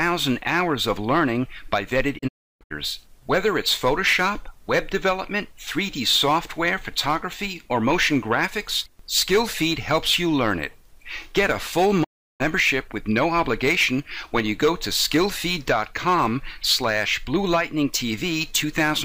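At 2.17 s the sound fades to silence in a few short holes until 2.72 s, and at 12.03 s it mutes again until 12.42 s. Both are digital broadcast dropouts: the receiver muted over bad frames, with quick 20 ms fades, and the audio sent during those gaps is gone.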